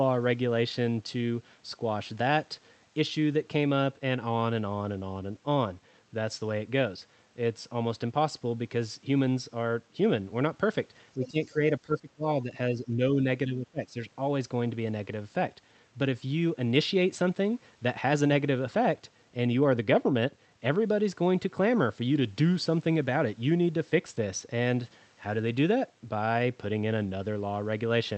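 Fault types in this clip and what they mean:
Speech suppressed in double talk, 11.17 to 13.96 s: four dips, at 11.17, 11.79, 12.43 and 13.46 s, with the talker pulled down by roughly 5 to 20 dB. It is likely an echo canceller that could not tell the talker's speech from loudspeaker echo while both sides spoke, and so attenuated everything.
Other side's voice leaking through, 11.25 to 11.46 s: a brief second voice sits about 15 dB under the talker. It likely comes from the talker's own loudspeaker, picked up by the microphone and left incompletely cancelled, so a scrap of the other side passes into the call.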